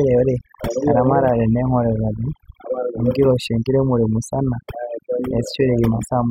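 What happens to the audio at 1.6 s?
At 1.6 s the speech is under overdone noise removal, which runs through the whole clip. A noise reducer set too aggressively shuts off individual frequency bands near its noise estimate, leaving near-silent gaps with twinkling specks. Unlike codec smearing, the artefacts cluster in the quiet background and soft speech edges.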